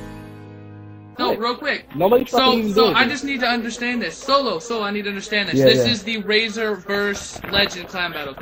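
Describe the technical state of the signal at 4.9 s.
At 4.9 s you're hearing MP3 compression artefacts, and they run through the whole clip rather than just that moment. The damage is plainly audible. The highs have that watery, swirly quality where weak frequency components flicker in and out between frames. That's likely an encoder starved of bits, dropping treble and zeroing quieter content. The degree of damage fits a bitrate around 64 kbps.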